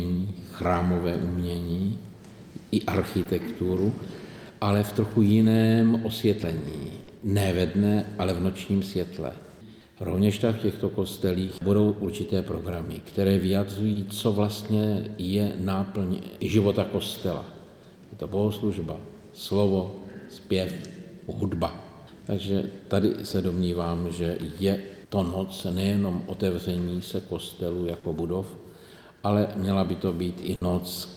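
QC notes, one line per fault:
3.23, 7.03, 11.45, 13.93 and 27.99 s, short concealed packet loss: 20 to 40 ms gaps filled by extending the preceding sound, heard as brief smears rather than clean skips, at irregular spacing.
6.43, 16.41 and 26.39 s, audio missing between chunks: abrupt skips of about 20 ms exactly 10 s apart, likely lost at block boundaries, spliced directly with nothing synthesised to cover them.
30.55 to 30.63 s, burst of packet loss: a 60 ms hole held over by continued sound that fades as it goes, longer and more audibly decaying than the single short concealments.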